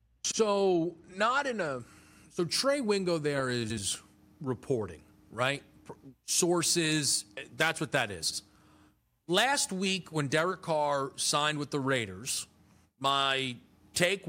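Speech that turns thin, bright and hissy with exaggerated sibilance from 1.80 s, just after "not in a", to the end. Pre-emphasis was left on: the treble boost, matching a 50 µs FM curve, was never undone, leaving about 11 dB extra at 10 kHz.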